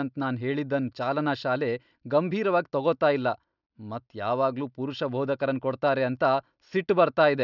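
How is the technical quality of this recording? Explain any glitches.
No technical faults can be heard in this recording.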